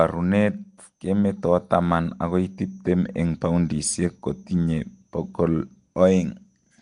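A speech recording carries a rough, hissy halo and a smeared, underwater quality from start to finish, with nothing above 10.6 kHz. This is likely Nellymoser compression, the old Flash microphone codec, and the damage fits a rate around 44 kbps. Unlike the metallic, warbling swirl of a starved MP3, the coder here spends a fixed budget per block and fills unfunded bands with noise, so the harshness sounds grainy and hissy rather than chirpy.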